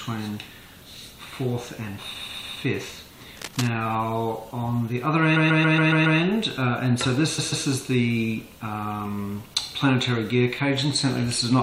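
From 2.20 to 2.61 s, repeated frames: a block of about 139 ms, consistent with a run of roughly six compressed frames, plays three extra times. This adds 0.42 s and gives a mechanical stutter. The same fault returns from 5.35 to 6.19 s with six extra plays, adding 0.84 s, and again from 7.37 to 7.65 s with two, adding 0.28 s. What separates this from a dropout or a random glitch is that nothing is missing: the identical slice recurs at a steady 139 ms rhythm, and the clip grows longer by exactly that repeated time.

From 3.36 to 3.69 s, cable scratch noise: a dense, irregular rustling sits on top of the sound, about 10 dB below it. It is likely caused by a worn cable, connector or control being moved so that its contact resistance fluctuates rapidly. Unlike the repeats, it adds no time and has no regular rhythm. Unlike steady hiss or hum, it arrives as a brief, uneven burst and then stops.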